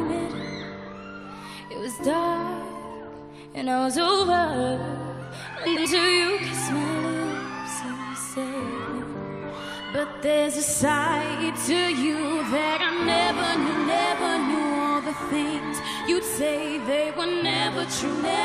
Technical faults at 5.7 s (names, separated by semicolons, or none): frames out of order